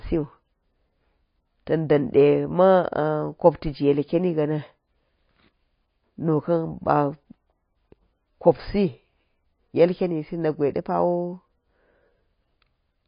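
From start to finish the speech has a hard ceiling at 5.1 kHz and a watery, swirly texture, with s sounds chirping metallically. That's likely MP3 compression starved of bits, which fits a very low bitrate of roughly 23 kbps, so the encoder chopped the treble and let weak frequency lines flicker frame to frame.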